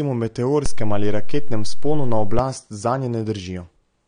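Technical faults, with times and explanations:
Throughout: AAC compression. The speech sounds dull and smeared, with a fizzy, warbling edge on sibilants and nothing above 9.7 kHz. This is likely low-bitrate AAC-LC coding, around 32 kbps by the sound, lowering the cut-off and coarsely quantising the spectrum.
0.66 to 2.39 s: DC step. A low thump at 0.66 s and another at 2.39 s, while the speech runs on unchanged. The waveform's zero line jumps to an offset, holds there, then drops back, and each sudden shift is heard as a thump.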